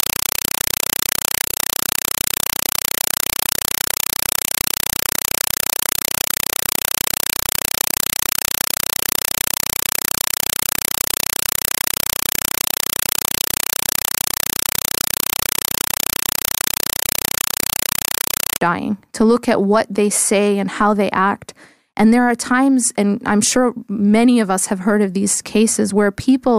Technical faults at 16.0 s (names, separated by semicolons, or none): compressed stream played as audio